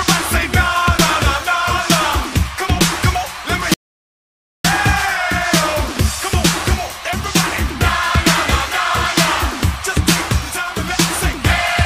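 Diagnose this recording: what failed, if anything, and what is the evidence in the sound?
The input link most likely dropped, so silence was written: an audio dropout to silence from 3.74 to 4.65 s, about 0.91 s of sound lost with no room tone.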